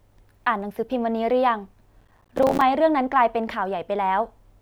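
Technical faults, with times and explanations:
2.01–2.61 s processor overload crackle: missed deadlines leave dozens of silent gaps around 5 ms each, heard as gritty tearing, not one clean dropout.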